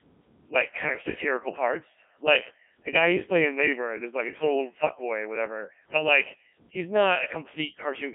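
Speech, passed through a Codec 2 vocoder for its whole length. Heavy damage makes it robotic and buzzy. The waveform is resynthesised from sine waves, which fits a rate near 1.3 kbit/s. The band runs from 150 Hz to 3.5 kHz, with nothing above 3.8 kHz.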